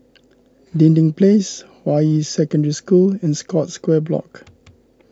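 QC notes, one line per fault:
No faults found in this speech clip. Nothing here calls for a QC note.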